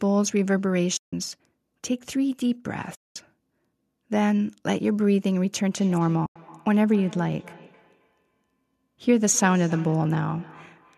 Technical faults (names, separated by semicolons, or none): AAC frame loss with muting; feedback echo between two devices